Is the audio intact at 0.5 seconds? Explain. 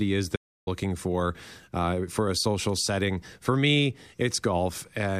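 No. The input was likely lost between 0.36 and 0.67 s, through a disconnect or mute, while recording kept writing silence. This audio dropout to silence cuts the speech off for 0.31 s, leaving dead silence with no room tone and the content gone.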